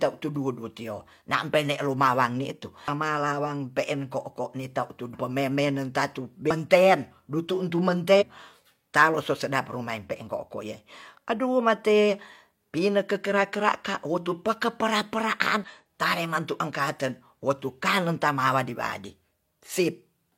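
At 2.84–2.88, 5.10–5.15, 6.46–6.51, 8.17–8.23 and 15.64–15.69 s, damaged data in a compressed stream makes the decoder misread frames and resync, giving brief chirps, squawks, clicks or short holes that appear as broadband smears or abrupt waveform discontinuities.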